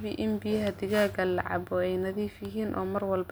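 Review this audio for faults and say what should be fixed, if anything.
No faults; nothing needs fixing.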